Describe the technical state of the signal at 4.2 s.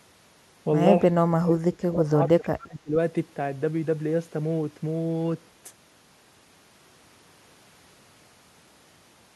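At 4.2 s the speech signal is intact, with no audible fault at that moment.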